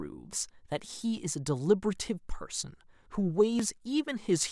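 It's a short speech clip with one glitch worth flagging: at about 3.6 s the sound jumps forward instead of flowing on. There's no gap of silence, just an abrupt splice where a sliver of audio, roughly ten milliseconds, has gone missing. That's most likely a dropped buffer (overrun), where the recording software didn't fetch a block of samples in time, the hardware wrote over it, and the audio on either side got butted straight together.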